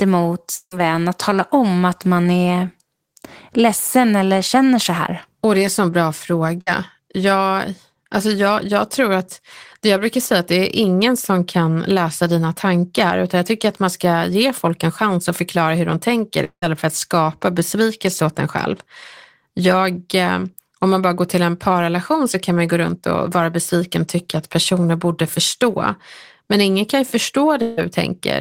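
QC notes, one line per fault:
0.55–0.73 s, 16.44–16.64 s, 27.62–27.79 s, long network dropout: The speech stops and the last sound is drawn out as a fading buzz or hiss. At 0.55 s this lasts about 0.16 s and then leaves roughly 60 ms of silence. At 16.44 s it lasts about 0.18 s with roughly 80 ms of silence. At 27.62 s it fades across the whole 0.15 s gap. The likely cause is that no audio arrived for those stretches, so the receiver extended the last sound until it died out. The speech then resumes further on, without the lost portion.
6.61–6.68 s, burst of packet loss: A short held buzz or fading hiss of about 55 ms replaces the speech, and then the speech jumps ahead. Roughly 60 ms of audio was lost or arrived too late to play. The receiver continued the last sound and turned it down across the gap.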